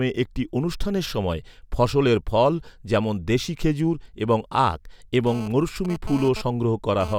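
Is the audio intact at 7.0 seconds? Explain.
No. From 5.27 to 7.14 s, after "দেশী খেজুর এবং আখ", GSM phone buzz from a 2G phone's data bursts at 217 Hz sits about 14 dB below the speech as a raspy intermittent buzz, showing as evenly spaced harmonic lines on a spectrogram.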